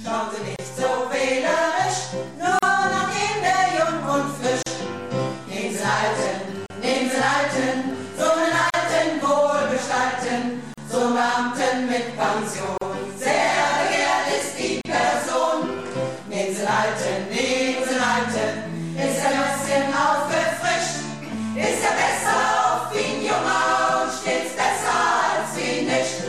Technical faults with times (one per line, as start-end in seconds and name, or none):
0.56-0.59 gap at a join of encoded pieces
2.59-2.63 gap at a join of encoded pieces
4.63-4.66 gap at a join of encoded pieces
6.66-6.70 gap at a join of encoded pieces
8.70-8.74 gap at a join of encoded pieces
10.74-10.78 gap at a join of encoded pieces
12.78-12.81 gap at a join of encoded pieces
14.81-14.85 gap at a join of encoded pieces